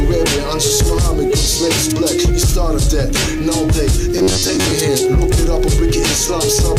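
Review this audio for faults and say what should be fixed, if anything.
From 4.18 to 4.75 s there is robotic sound from repeated short buffers. The audio becomes a rigid, metallic buzz near 94 Hz. That rate fits a segment of about 10.7 ms being replayed. Roughly half the material is repeats. The likely cause is audio arriving too seldom. Larger buffers or a steadier audio feed would prevent it.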